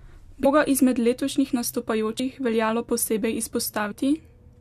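Compressed frames skipped at 0.44 s, 2.18 s and 3.90–3.92 s: whole blocks of the encoded stream, each 23.2 ms long, never reach playback. About seven frames (roughly 150 ms) drop out at the first point, just before "izmed letošnjih", and about three (roughly 70 ms) at each later one. The speech leaps forward, and because adjacent frames overlap, each join is a short smeared blip.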